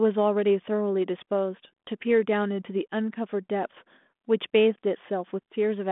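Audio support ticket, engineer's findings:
No fault found; telephone-band speech, nothing audible to action.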